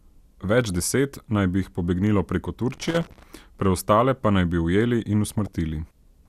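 DAB burbling at 0.70 s, just before "deset naj bi jih", is brief. Under weak reception, bit errors slip past the error correction into the MP2 data; corrupted samples put short blips of noise in single sub-bands, and corrupted scale factors make sub-bands jump in level for up to a frame.

Loose connector crackle runs from 2.71 to 3.23 s as an irregular, scratchy burst. A worn or dirty contact is making and breaking rapidly, chopping the signal on and off.

Inside that stretch, from 3.08 to 3.10 s, just before "preostale pa naj bi", the burbling returns. It comes back once more from 5.29 to 5.47 s, after "naj bi ujeli in", as a longer patch across several frames, which fits a bit error rate of around a fifth of a percent.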